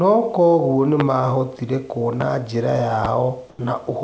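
At 1.00 to 1.03 s, a loud pop cuts through. It peaks about 15 dB above the sound. Two more follow, at 2.21 to 2.24 s and 3.05 to 3.08 s, each about 10 dB above it. Each is a single sharp burst lasting about 30 ms. The sound carries on underneath. A sudden voltage step was likely added to the signal, from a switch, static or a driver glitch, and the circuits after it shaped that step into a thump.

At 3.50 to 3.59 s, comfort noise takes the place of the background for 90 ms. The real room noise, heard elsewhere about 40 dB below the speech, gives way to a smooth, featureless hiss about 2 dB quieter. The sender likely stopped transmitting during a pause, and the receiver filled the gap with synthetic noise. On this call path, where nothing reaches above 8 kHz, the swap is short.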